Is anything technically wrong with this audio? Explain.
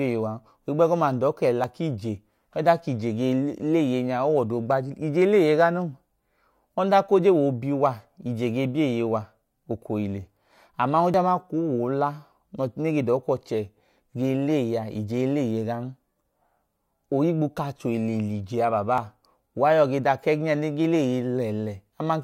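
Yes. At 1.64, 11.14 and 18.98 s the speech jumps abruptly, as if a sliver had been snipped out and the ends butted together, with no gap of silence. The first skip is the largest, around 40 ms, and the later two are about half that. This is likely a dropped buffer (overrun): the recording software fell behind, incoming samples were overwritten before being read, and the stream carried on from the next block.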